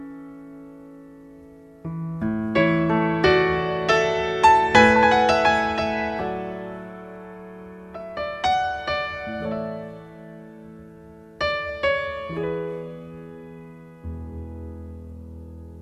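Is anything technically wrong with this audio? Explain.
No, there's nothing technically wrong with this audio.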